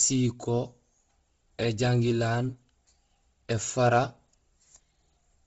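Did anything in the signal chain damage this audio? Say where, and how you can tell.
Yes, at the codec stage: likely Bluetooth LC3 compression. Nothing survives above 7.7 kHz, and heavy noise-filling makes the speech breathy and grainy throughout.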